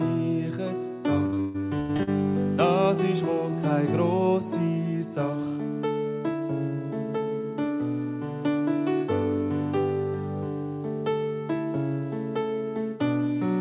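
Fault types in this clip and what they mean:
Repeated packet loss (robotic sound): between 1.26 and 2.09 s, lost chunks keep getting patched with repeated sound, so nearly half of that stretch comes out choppy and robotic.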